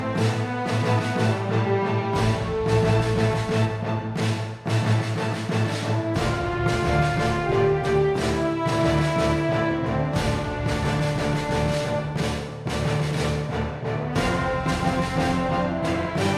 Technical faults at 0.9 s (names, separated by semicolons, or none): none